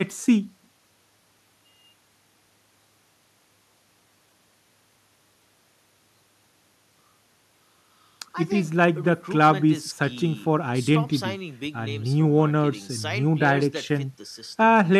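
Nothing technically wrong can be heard in this recording of speech at any point.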